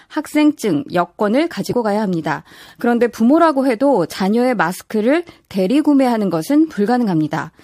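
The speech has compressed frames skipped at 1.70 to 1.73 s, where about 20 ms of audio vanishes and the sound jumps ahead. Unlike a dropout, there is no silent gap.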